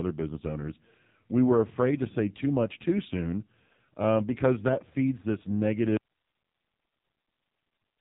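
AMR narrowband mobile codec, from start to finish: the speech has passed through the mobile speech coder, which models the vocal tract and excites it with only a few pulses in each short subframe. Nothing above about 3.8 kHz survives, leaving a thin, boxed-in tone. The damage is heavy, with a buzzy, synthetic edge on every syllable, which fits one of the codec's lowest modes, around 5.9 kbps.

Audio dropout to a faint residue, at 5.97 s, just after "because that feeds this": the speech cuts off abruptly and does not return before the clip ends. What remains is only hiss, far below the speech level at roughly 50 dB down. The likely cause is that the wanted signal was lost upstream while the path after the break stayed live and kept passing its own noise floor.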